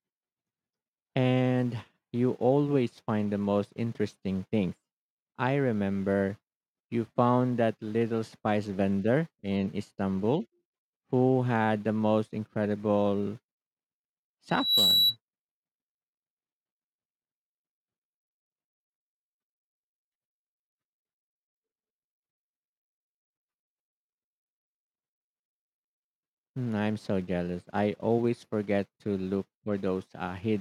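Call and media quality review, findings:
Loudspeaker feedback squeal, 14.49–15.17 s: single tone at 3.9 kHz swelling over roughly 0.3 s to about 5 dB above speech; mic re-capturing its own speaker, loop gain above unity.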